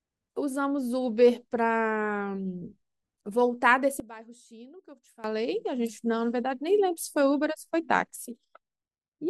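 Speech, with two sudden gain jumps: at 4.0 s the level drops by about 17 dB until 5.24 s, and at 8.16 s by about 6 dB to the end. Voice and background fall together, likely from gain switched without a ramp, showing as abrupt step-edges in the waveform envelope.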